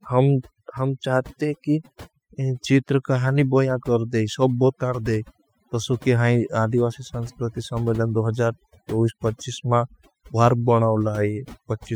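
Overdone noise removal runs throughout: bands near the estimated noise floor are cut hard, leaving a near-silent background with twinkling specks.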